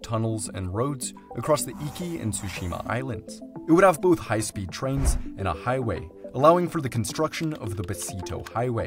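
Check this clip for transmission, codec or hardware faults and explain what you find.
No faults detected.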